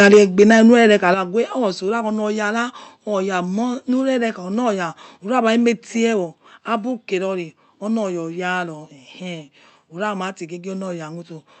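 From the start to 0.94 s the speech is flattened at its peaks with a harsh, crackling edge, likely microphone overload: the input ran about 6 dB past the converter's limit, clipping a few percent of the samples and squaring off the loudest syllables. At 0.14 s and again at 1.14 s the speech and background drop abruptly, by about 4 dB and then about 7 dB, likely the microphone volume stepped down by the call software reacting to the clipping. Each lowers the device's input gain in one step. The audio stops at 8 kHz, consistent with an Opus call path at a wide-band setting.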